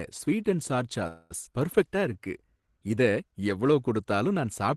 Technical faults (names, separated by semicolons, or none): call audio freeze; skip ahead; jitter buffer slow-down